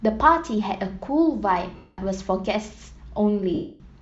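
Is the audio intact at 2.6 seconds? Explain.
No, Bluetooth LC3 compression runs through the whole clip, including 2.6 s: the speech has a plainly audible breathy, grainy upper edge, likely from LC3's noise-filled high band at around 48 kbps with 10 ms frames.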